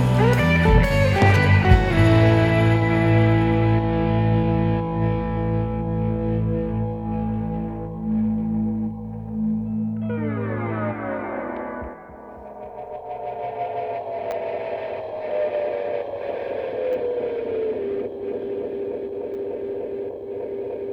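Brief clicks at 14.31 s, 16.93 s and 19.34 s are repeated buffers. Each time, fresh audio arrived late, so the device replayed its last block once, about 10 ms long, which fits a 10 ms buffer. The hard join makes a tick rather than a stutter.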